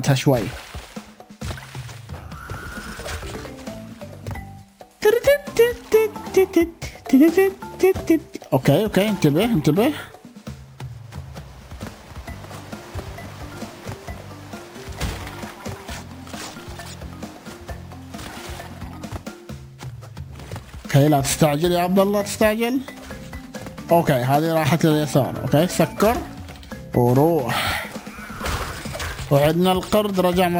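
Throughout the audio, a bright metallic fizz rides along with the sound, rising and falling with its level. This is imaging from sample-and-hold upsampling. The rate was raised by holding each sample rather than interpolating, so no filter removed the mirrored spectrum. The first image band sits between 12 kHz and 24 kHz at about -24 dB relative to the signal, moving opposite to the pitch, which points to a 24 kHz source raised to 48 kHz.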